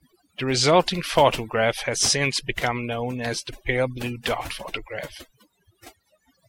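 A noise reduction stage set far too aggressively runs across this entire speech clip, a case of overdone noise removal. Frequency bands near its noise estimate are pulled down or cut out, and quiet parts of the voice go with them. The background drops and breaks up into twinkling specks.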